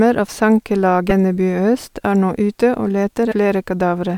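At 1.09 to 1.12 s and again at 3.31 to 3.34 s the speech skips forward and a brief glitch of about 30 ms marks the jump, roughly one 26 ms MP3 frame. This is likely a broken MP3 bit reservoir: after frames were cut out, the following frame borrowed data from bytes belonging to a different frame.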